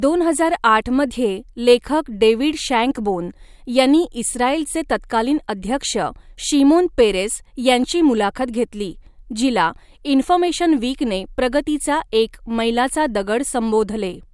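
Speech recording with nothing technically wrong with it at any point.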